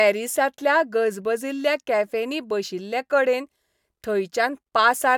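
No technical faults are audible.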